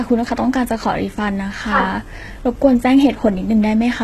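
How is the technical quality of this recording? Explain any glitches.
The recording has one fault: likely HE-AAC compression throughout, consistent with a low bitrate around 16 kbps. The treble is rebuilt by copying lower bands upward, so s sounds turn gritty and lispy, the damage is plainly audible, and nothing remains above 12.3 kHz.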